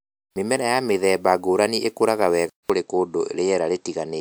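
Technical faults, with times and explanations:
2.50 to 4.20 s, input switched to a poorer device: after a 200 ms gap, the speech loses everything above 8.1 kHz and gains a faint new noise floor, likely a different microphone.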